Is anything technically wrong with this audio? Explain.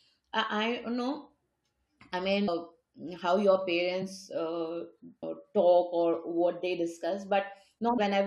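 Yes. There are two kinds of fault in this speech.

Audio missing between chunks occurs at 2.48, 5.23 and 7.98 seconds. Each time the speech jumps forward with no silence at the join. About 0.3 s of sound seems to be gone at each point. That is long enough to clip part of a word. The steady spacing likely comes from a recorder working in 3-second chunks, which drops a short piece each time it closes one chunk and opens the next.

Compressed frames skipped occurs from 3.99 to 4.03 seconds, just after "how your". Here a very short stretch of audio, around 20 ms, is missing. Whole compressed frames were not played. They were either absent from the file or rejected as damaged by the decoder. The speech lurches slightly ahead.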